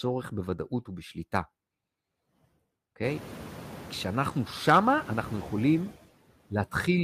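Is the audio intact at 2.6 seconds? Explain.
No. Noise suppressor artifacts run through the whole clip, 2.6 s included. Bands judged to be steady noise are cut by about 15 dB frame by frame, so the leftover noise sinks between words and rises under them. Unlike plain room noise, the residue pumps with the speech.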